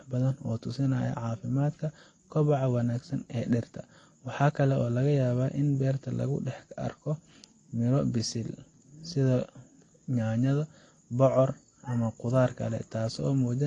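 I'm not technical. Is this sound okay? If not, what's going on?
No. Transcoding between lossy codecs, throughout: the speech was likely compressed twice by different methods, so their blurring stacks and nothing remains above 9.8 kHz.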